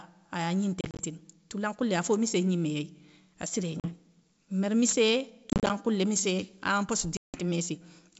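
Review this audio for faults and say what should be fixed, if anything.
Hard-edged holes of silence break the speech at 0.81–1.05 s, 3.80–3.93 s, 5.50–5.71 s and 7.17–7.37 s, and after each the sound returns with a click, a jump in level or brief distortion. This is packet loss on an ADPCM call. About 100, 40, 110 and 170 ms went missing, with the first and third losses scattered in runs of up to 30 ms. The decoder's adaptive predictor and step size then drifted from the sender's. Packet-loss concealment with decoder-state recovery, or forward error correction on the link, would prevent it.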